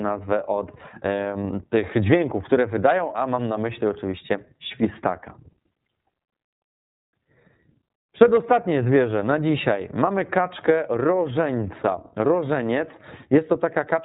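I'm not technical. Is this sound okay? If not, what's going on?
No. The whole recording has gone through the iLBC codec, a phone-call compressor. It cuts off everything above 3.8 kHz, so the speech sounds muffled. It also squeezes the sound in small 30 ms chunks, which leaves it plainly rough and slightly robotic.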